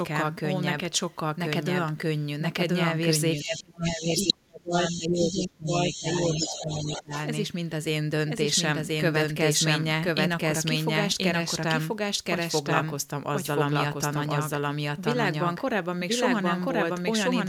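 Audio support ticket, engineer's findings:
Doubled audio track, whole clip: full-band copy of the speech trails about a second behind at roughly equal level, with no decay or room colour. Likely a second capture via a slower path, or an edit holding two out-of-step copies, mixed back into the output.

Other side's voice leaking through, 3.37–3.62 s, 3.86–4.33 s, 4.73–5.43 s, 5.67–7.23 s: a second voice intrudes in scraps, mostly well below the main speech but as loud as it at 3.86–4.33 s. Far-end loudspeaker playback is likely reaching the mic and is not fully removed by the echo canceller.

Speech suppressed in double talk, 3.4–7.12 s: main speech dips and drops out in pieces, about 3 s affected in total, deepest by around 30 dB, overlapping the intruding voice. The echo canceller likely failed to separate near-end speech from loudspeaker echo during overlap and attenuated both.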